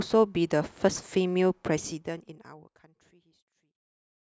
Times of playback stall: none

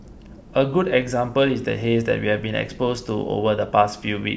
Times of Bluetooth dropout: none

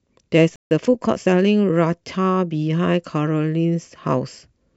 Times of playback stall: 0.56-0.71

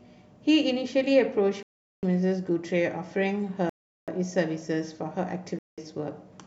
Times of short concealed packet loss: none

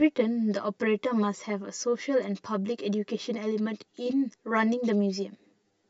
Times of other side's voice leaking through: none

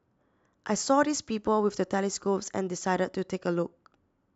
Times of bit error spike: none

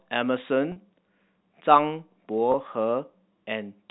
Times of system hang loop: none

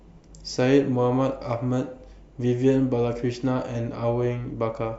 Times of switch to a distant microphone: none

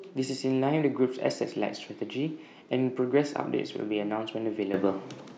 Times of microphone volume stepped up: 4.74

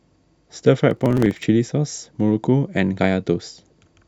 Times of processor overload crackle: 0.87-1.48

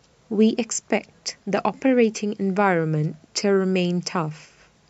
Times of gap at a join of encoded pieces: none

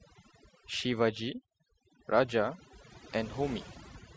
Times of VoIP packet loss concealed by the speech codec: none

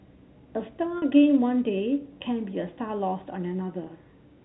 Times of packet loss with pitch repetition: 0.98-1.02, 3.84-3.86

